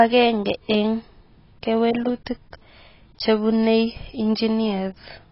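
From start to finish the speech sounds dull and smeared, with nothing above 5.6 kHz and a fizzy, warbling edge on sibilants. That's likely heavy AAC compression: the encoder dropped high bands and coarsely quantised the rest, which fits a bitrate around 16 kbps.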